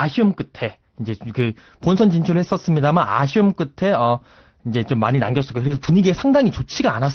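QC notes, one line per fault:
5.15 to 5.93 s, lost packet rebuilt from error correction: a dense run of 20 ms stretches recurring about every 40 to 80 ms, which sounds like audio that keeps going but turns rougher and noisier in quick pulses. Each missing packet was replaced by the low-bitrate copy that Opus carries in the following packet. The decoder plays that coarser copy instead of leaving a hole, so there is no gap, only a grainier texture through this stretch of the call, which is band-limited to 6 kHz.
5.67 to 5.71 s, short concealed packet loss: inside that same run, 20 ms of audio arrived too late to be decoded or not at all. The receiver filled the hole by extending the preceding sound, carrying its pitch forward if it was voiced or using shaped noise if it was not, and then blended back into the real audio. This comes across as a brief smear or wobble, immediately followed by one more packet rebuilt from the error-correction copy.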